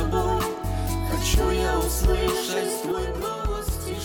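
At 2.92 s the level drops abruptly by about 6 dB and stays down to the end of the clip, the signature of one channel dropping out. One stereo channel has likely stopped delivering signal, so the mono sum keeps only half of the material shared by both sides, and anything carried only in the missing channel vanishes. Unlike a fade or a gain ride, the step is instant, and apart from the loudness the sound is otherwise unchanged.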